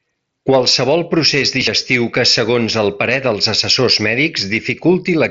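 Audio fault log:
Nothing stood out on listening to this speech clip.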